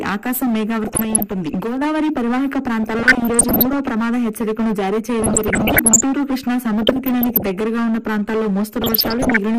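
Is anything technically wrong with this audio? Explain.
Yes, two problems are audible.

Throughout, the sound is dull and carries a gurgling, granular distortion, with upper frequencies flickering in and out. This is likely MP2 compression at a low rate, consistent with something around 80 kbps. MPEG Layer II divides the spectrum into 32 sub-bands and shares out a fixed bit budget. At this rate the upper bands are repeatedly shut off, and the remaining ones are quantised coarsely enough to be heard.

DAB burbling appears in five bursts: 0.83 to 1.54 s, 2.84 to 3.79 s, 5.20 to 6.04 s, 6.82 to 7.59 s, and 8.81 to 9.38 s. During each burst, the programme is broken up by burbling blips of noise in parts of the spectrum. These come from reception errors slipping past error correction into the MP2 data, with error rates somewhere between half a percent and one percent. Corrupted samples put short blips of noise into single sub-bands, and corrupted scale factors make individual sub-bands jump in level for up to a frame.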